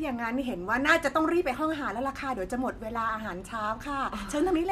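The recording comes through without any audible technical fault at any point.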